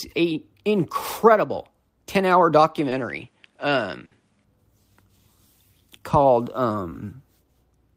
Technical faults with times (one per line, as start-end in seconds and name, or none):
2.78-4.44 input switched to a poorer device
2.89-2.93 short concealed packet loss
4.05-4.13 burst of packet loss
6.89-6.93 short concealed packet loss